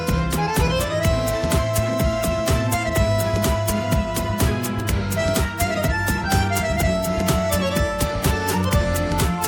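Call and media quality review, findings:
Faint hiss and roughness riding on the sound throughout, strongest on loud, bright passages, gone in silences. Sample clock jitter: converter clock timing wanders by under a microsecond, so errors track waveform slope, sitting about 40 dB below signal. Check ADC/DAC clock source.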